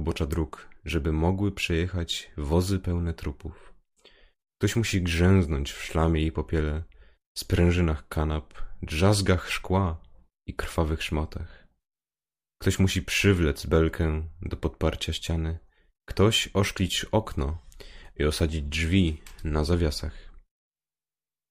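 Nothing in the speech stood out as a technical problem on listening.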